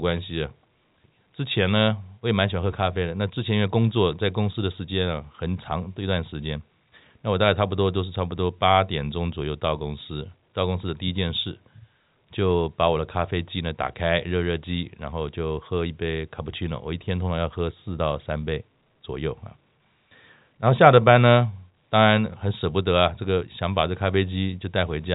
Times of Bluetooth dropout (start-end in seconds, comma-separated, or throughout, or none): none